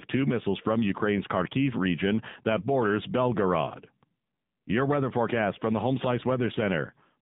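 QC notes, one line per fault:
Throughout, AMR narrowband mobile codec: the band is held to roughly 150 Hz to 3.7 kHz, so nothing above about 4 kHz survives. The voice has a buzzy, synthetic edge where a few pulses per subframe drive a vocal-tract model. The damage is plainly audible, consistent with a low mode around 7.4 kbps. This differs from plain band-limiting because the timbre itself is rebuilt and coarsened, not just filtered.
3.66–3.83 s, AMR bit errors: right after "region that borders", the voice turns hoarse, scratchy and gargly for about 170 ms, which fits eight consecutive 20 ms frames. Pitch and level roughly hold because the protected core bits arrived intact, while flipped low-priority bits misplace excitation pulses and skew fine gain and spectral values. That kept pitch and level, with no silence or repeated sound, separates it from a dropped-frame concealment gap.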